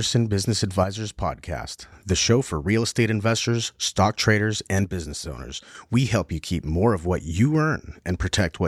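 One channel drops out from 0.84 to 1.92 s, ending just before "the show for real", and again from 4.84 to 5.75 s, right after "estate investors stock traders". Each time the speech abruptly falls about 6 dB, likely because one stereo channel went silent and halved the mono sum.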